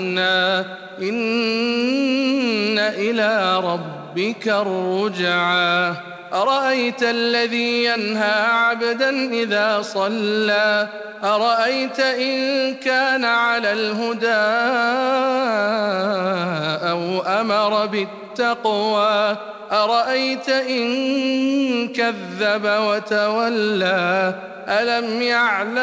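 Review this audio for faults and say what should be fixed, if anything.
No faults turn up in review, so nothing needs to be fixed.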